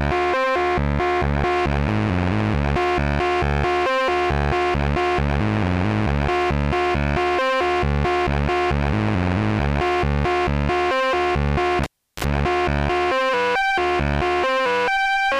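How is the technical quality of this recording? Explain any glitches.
One fault mars this recording. From 11.84 to 12.24 s, a cable is pulled and plugged in. A pop precedes about 360 ms of near silence. Then comes 44 ms of 50 Hz mains buzz from the tip, and a closing pop.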